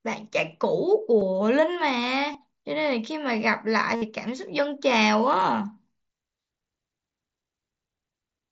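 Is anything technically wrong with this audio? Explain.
Yes. The speech, carried over a wideband mSBC Bluetooth link, shows concealed Bluetooth headset packet loss three times. Brief gaps at about 1.20 s and 2.33 s, each roughly 15 ms and consistent with two 7.5 ms frames, are patched over by the concealment. A longer 60 ms run from 3.96 s to 4.02 s exposes the concealment. The receiver keeps repeating the best-matching recent stretch of waveform, producing a buzzy, full-level tone that warbles slightly as real audio resumes.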